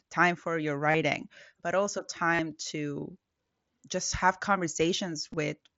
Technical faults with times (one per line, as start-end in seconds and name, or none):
0.91-0.94 concealed Bluetooth headset packet loss
2.34-2.39 concealed Bluetooth headset packet loss
5.31-5.37 concealed Bluetooth headset packet loss